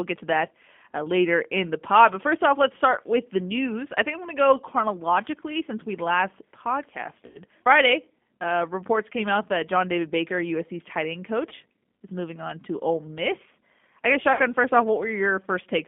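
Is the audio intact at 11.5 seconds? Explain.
No. Between about 11.49 and 11.53 s, right after "tight end" and before "is moving on to", there is VoIP packet loss concealed by the speech codec. About 20 ms of audio never arrived, which points to a single lost packet. The decoder filled the gap by extrapolating from its last pitch and vocal tract filter while lowering the gain, so the sound there is smeared into a fading buzzy tone or coloured noise. Because each frame builds on the one before, the speech takes a short while after the gap to sound right again.

The moment also carries the G.729 codec damage present throughout the clip. The speech passes through a line band of roughly 200 Hz to 3.5 kHz and is rebuilt at a rate that fits 8 kbit/s, from a vocal tract filter, a pitch predictor and a few pulses per frame. The result is a plainly audible rough, synthetic colouring, with nothing above 3.5 kHz.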